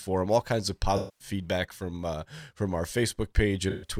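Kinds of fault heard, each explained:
AAC frame loss with concealment: lost frames were patched from the last good spectrum, so after "kinds of" (0.96 to 1.28 s) and again at 3.69 to 3.90 s a smeared, phasey wash replaces the speech, unlike the abrupt silence of a dropout.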